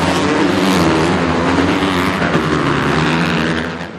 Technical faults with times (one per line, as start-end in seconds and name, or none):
none